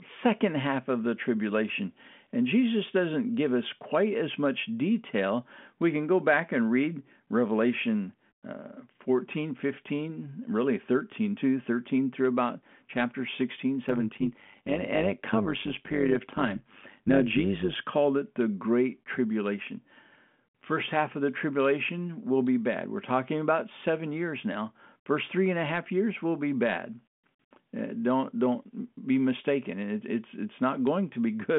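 From 13.89 to 17.77 s, before "called it the", overlap-add ripple: mismatched frame overlap pulses the level about 11 dB around 100 times a second, a metallic buzz.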